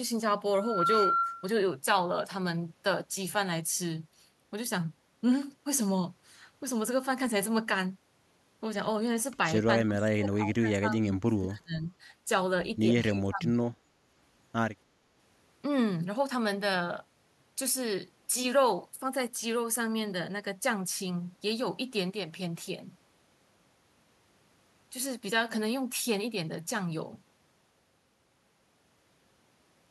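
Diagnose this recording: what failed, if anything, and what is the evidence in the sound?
A loudspeaker feedback squeal from the acoustic loop between speaker and microphone: a 1.4 kHz tone swells over roughly a third of a second, from 0.53 to 1.59 s, about 5 dB above the speech.

In call processing, the speech is pulled down, by about 30 dB at 9.79 to 11.87 s and about 25 dB at 13.09 to 13.75 s, most likely speech suppressed in double talk by the echo canceller.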